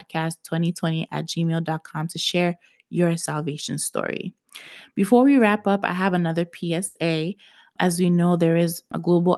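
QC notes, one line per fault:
6.87–6.98 s, burst of packet loss: right after "up I have another", a run of packets never arrived in time, so the receiver stretched the last sound for about 80 ms, fading it as a held buzz, then resumed with about 80 ms of speech skipped. On a spectrogram, smeared, repeated harmonics weaken into a blurred band before an abrupt restart. The waveform shows a periodic, decaying envelope then a step discontinuity, with content below the call path's 12 kHz ceiling.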